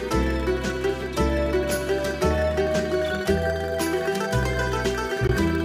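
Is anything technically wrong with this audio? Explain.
Yes. From 5.27 to 5.32 s there is a Bluetooth dropout. The output goes silent with abrupt edges or a fade of a few milliseconds, then the sound resumes further along, as if it had kept playing. The likely cause is a single audio packet that failed to reach the headphones in time and was discarded.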